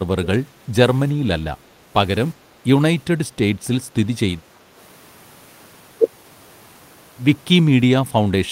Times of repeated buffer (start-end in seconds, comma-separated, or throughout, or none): none